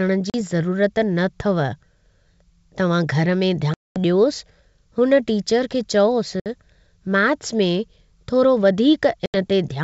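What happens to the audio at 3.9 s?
Packet loss on an ADPCM call, from 3.74 to 3.98 s: about 220 ms, roughly ten packets, drops to hard-edged silence, and the decoder's predictor mistracks, so speech resumes slightly distorted.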